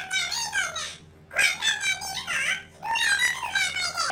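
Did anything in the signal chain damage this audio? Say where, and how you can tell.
Yes. The damage happens at the sample-format conversion or buffer stage: planar audio read as interleaved, throughout the speech. Each 26.12 ms block is played twice at double speed, once per channel, so the pitch sits 12 semitones (an octave) high while the pace stays normal, with a buzzy flutter at 38.3 Hz. A spectrogram shows every harmonic doubled in frequency and regular vertical striping every 26 ms. The waveform shows each block's shape repeated as two compressed copies.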